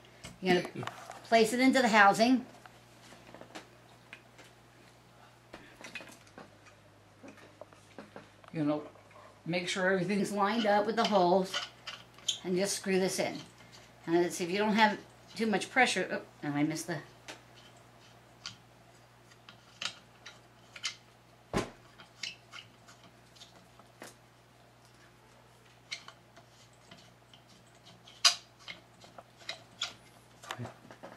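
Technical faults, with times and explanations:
6.23–10.20 s, section at the wrong speed: for roughly four seconds the audio drops to about two semitones lower and drags, running at 0.869 times its proper rate, then snaps back to normal pitch and pace at 10.20 s. Because speed and pitch shift together, the passage sounds deeper and slower all at once rather than just retuned. The likely cause is that this stretch was played back or edited against the wrong clock, stretching its timing and lowering its pitch.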